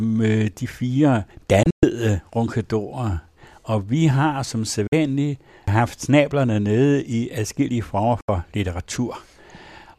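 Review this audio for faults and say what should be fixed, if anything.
The receiver lost valid frames and muted until good ones returned, a digital broadcast dropout. The speech snaps to silence through a 3 ms fade at 1.63 s (about 144 ms lost in holes across 192 ms), 4.87 s (48 ms) and 8.21 s (72 ms). Stronger error protection or a better received signal would prevent it.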